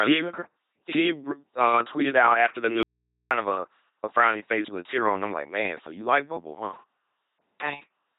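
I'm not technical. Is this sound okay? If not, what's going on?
No. The speech has been through an LPC-10 vocoder, heavily. This crude, low-rate system rebuilds the voice from buzz or hiss instead of sending the real sound. So it sounds robotic and mechanical. Nothing above 3.9 kHz survives, which makes it thin and dull.

There is also an audio dropout to a faint residue. After "tweeted out after the", at 2.83 s, the voice suddenly vanishes. For about half a second only a low hum remains. The speech returns at 3.31 s with "of a a frowny". The likely cause is a brief break in the signal while the equipment stayed switched on.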